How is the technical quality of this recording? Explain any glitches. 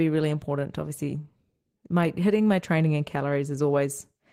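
The recording is impaired by a steady timing fault affecting its pacing throughout.

Clock drift between sender and receiver: the sender's clock runs roughly 3% slow, so the receiver's buffer keeps draining, and the speech drifts behind throughout.

Repeated timing corrections: from 0.16 s to 4.14 s the receiver repeatedly duplicates short pieces to fill gaps, adding about 150 ms overall, heard as slight hiccups and slightly dragging, uneven tempo.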